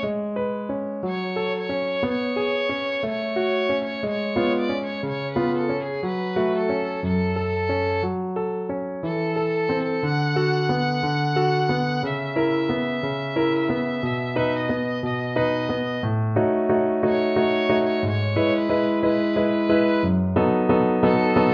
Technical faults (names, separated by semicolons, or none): none